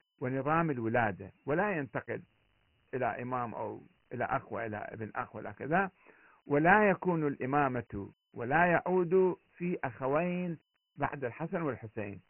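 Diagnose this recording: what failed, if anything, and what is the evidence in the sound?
The codec stage failed: this speech carries Dialogic VOX ADPCM damage throughout. Nothing is present above 3.1 kHz, and a heavy gritty hiss rides on the speech. Coarse 4-bit step-size adaptation tracks the waveform poorly, consistent with a 24 kbps stream at 6,000 samples per second.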